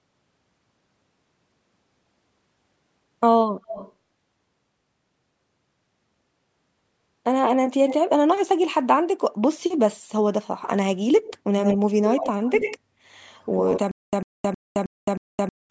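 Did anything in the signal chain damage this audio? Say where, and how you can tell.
Yes. An echo leak at the call-processing stage lets a delayed, quieter copy of the speech through at 3.65–3.93, 7.87–7.95, 11.25–11.34, 11.59–11.78, 12.04–12.78 and 13.15–13.8 s, likely from a far-end loudspeaker the echo canceller missed. The copy trails by 236 ms early on, then 80 ms, sitting roughly 5 to 15 dB below. On a spectrogram the speech patterns repeat, shifted right.

A stutter with silent gaps at the playback or buffer stage runs from 13.91 s to the end. A 100 ms fragment repeats five times every 315 ms, with 215 ms of digital silence between, likely a stalled stream replaying its last chunk. The waveform shows identical bursts separated by flat silent gaps.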